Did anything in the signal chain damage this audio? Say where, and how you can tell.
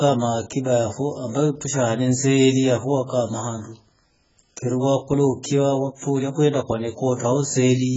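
Yes. Heavy AAC compression damage runs through the whole speech clip, and the codec stage is the likely cause. Nothing survives above 7.6 kHz, so the speech sounds dull, and sibilants and sustained sounds carry a smeared, warbling, fizzy texture. That points to AAC-LC running at a very low bitrate, around 12 kbps. It quantised its frequency lines so coarsely against its hearing model that it dropped the top band and left holes or substitute noise in the spectrum.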